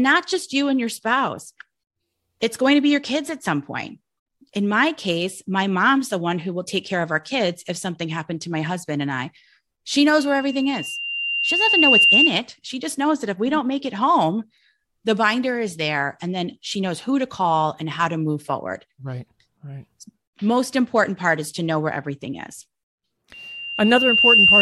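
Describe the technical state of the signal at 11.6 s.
At 11.6 s a piercing 2.8 kHz whistle sits well above the speech, roughly 10 dB louder, still swelling over its roughly two-second build-up. This is loudspeaker feedback squeal, running from 10.17 to 12.32 s: the microphone re-amplifies its own loudspeaker until that frequency runs away.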